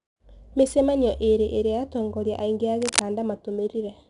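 From start to finish the speech carries 4-bit ADPCM compression. Each sample is coded as a coarse step from a prediction, so a gritty hiss rides along with every loud syllable and roughens the attacks. Nothing comes through above 10.6 kHz, which points to roughly 89 kbps at a sample rate near 22 kHz.

Right after "iria atongoria aingi a", from 2.82 to 3.02 s, there's a burst of cable scratch noise, roughly as loud as the speech itself. It's a dense, uneven scratchy rustle, likely from a worn cable or connector being moved and its contact flickering.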